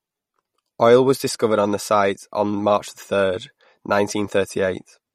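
The speech was likely squeezed through MP3 compression at a low rate, which fits roughly 48 kbps. Starved of bits, the encoder discards everything above 15.6 kHz and switches weak frequency lines on and off, leaving a plainly audible watery swirl and smeared consonant attacks throughout.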